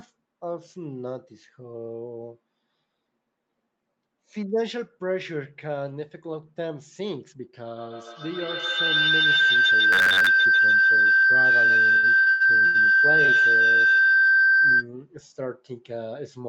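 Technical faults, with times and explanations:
7.77–14.89 s, feedback howl: a tone near 1.5 kHz builds up and peaks about 11 dB above the speech, with the repeats coming round roughly every 150 ms. The mic-to-speaker loop gains level on each trip, so the repeats grow instead of dying away, and it lasts until the loop is broken.
9.93–10.28 s, robotic sound from repeated short buffers: the speech turns into a rigid metallic buzz at 93.8 Hz. That's likely short chunks being replayed to cover audio that arrived too seldom, which fits a buffer of about 10.7 ms, with most of the stretch repeated.
11.97–12.76 s, repeated stalls (stutter): four separate stalls make the speech drag and hiccup. The jitter buffer kept running dry, and 309 ms of that stretch is held-over sound, the longest hold about 99 ms. Nothing is actually lost, but the timing is lumpy.
13.26–13.30 s, short stall from a late packet: one sound hangs on for about 21 ms with a slight buzz or dip. 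A packet showed up about 21 ms late, so the receiver stretched what it had and then picked up exactly where it left off, with nothing dropped.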